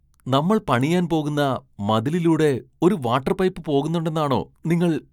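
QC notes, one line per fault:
No faults found in this speech clip. Nothing was flagged at any point, so there is no time or range to list.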